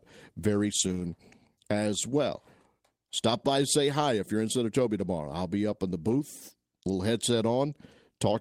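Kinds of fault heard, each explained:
Lost packet rebuilt from error correction: missing packets were replaced by low-bitrate copies carried in the packets that followed, so there is no gap. The speech turns rougher and noisier from 0.79 to 1.05 s, and briefly at 6.07 to 6.13 s.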